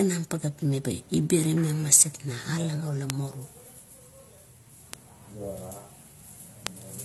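Throughout the speech, nothing sounds above 12.1 kHz and two sets of coding artefacts overlap, likely from transcoding between lossy codecs, consistent with AAC re-encoded as HE-AAC. A bit error spike gives single sharp broadband ticks at 1.44, 3.10, 4.94 and 6.67 s, the last spanning three samples, each a momentary power-of-two jump.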